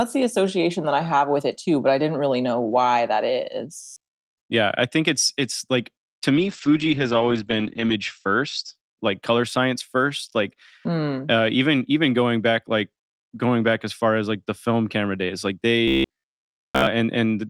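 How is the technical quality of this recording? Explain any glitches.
The recording has three glitches: two stretches of robotic buzzing and one period of degraded, muffled sound.

Robotic sound from repeated short buffers appears from 3.83 to 4.34 s, right after "really know why that", and from 15.88 to 16.87 s, after "film camera days like". The likely cause is audio arriving too seldom, so the same short fragment is replayed to fill the gaps. The repetition imposes a fixed 66.7 Hz buzz, which fits a fragment of about 15 ms. The first stretch is buzz throughout, and the second is mostly buzz.

A call bitrate drop runs from 6.34 to 8.81 s, between "it's it's like to" and "like color science first". The encoder's budget fell from 32 to 9 kbps, staying at its lowest for 1.61 s, and the audio bandwidth shrank from 20 kHz to 8 kHz. As a result, the speech sounds coarse and dull until the bitrate recovers.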